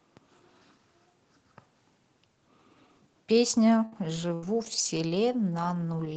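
Around 3.85 to 3.95 s there's a burst of packet loss: about 60 ms of the speech simply goes missing, and the receiver stretches the last sound into a fading buzz or hiss before jumping ahead. Right after, from 3.92 to 3.98 s, a lost packet is rebuilt from error correction, so there's no gap, but that stretch comes through rougher and grainier from the low-bitrate backup copy. The same pair repeats a moment later. Another burst of packet loss runs from 4.34 to 4.45 s, dropping about 60 ms behind a slightly longer held-over fill, and then 4.42 to 4.48 s comes back rough from error correction. One more rebuilt packet lands at 4.84 to 4.98 s, again sounding noisier rather than breaking up. Underneath it all, the call codec tops out around 8 kHz, which fits Opus running near 24 kbps.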